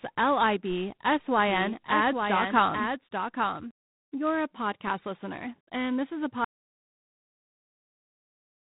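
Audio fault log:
Throughout: G.726 ADPCM. The speech has passed through G.726 at 24 kbit/s, so each sample carries only three bits describing its difference from an adaptive prediction. The coarse steps leave a harsh, rasping hiss that rises and falls with the speech level, and the damage is plainly audible. The band stops at about 3.8 kHz, so the sound is dull and telephone-like, with no sibilance or air above that point.
1.47 to 3.71 s: doubled audio track. A second full-band copy of the speech runs about one second behind the original, roughly 5 dB quieter. It has no decay or room colouring, so it sounds like a separate overlapping track, not an echo. It cuts in and out abruptly at both ends. This is likely a second capture arriving over a slower path or an edit that left two copies misaligned.
6.44 s to end: audio dropout to silence. Just after "and this is a" the speech stops mid-phrase, and the rest of the clip is silence with no room tone or noise floor. 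The input was likely lost through a disconnected device, a failed link or an unintended mute, while the recorder kept writing silence. Whatever followed that phrase was never captured.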